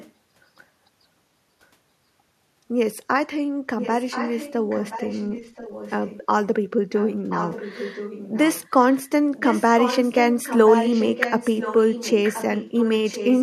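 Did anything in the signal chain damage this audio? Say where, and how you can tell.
Yes, an echo leak in call processing, likely from a loudspeaker-side echo canceller. A faint-to-moderate copy trails the speech by about 1.03 s at 0–0.12, 3.79–4.53, 4.7–6.26, 6.94–8.7, 8.94–8.98 and 9.35 s to the end. That fixed one-second lag separates it from room reverberation.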